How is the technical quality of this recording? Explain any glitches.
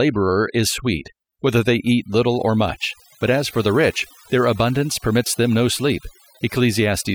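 The recording has one clear problem, present from start to finish: overdone noise removal. A noise reducer set too hard cuts individual frequency bands whenever they sit close to its noise estimate, taking quiet speech detail with them. Gaps fall to near silence sprinkled with twinkling specks. Unlike a noise gate, which mutes everything at once, the damage here is band by band, even while speech continues.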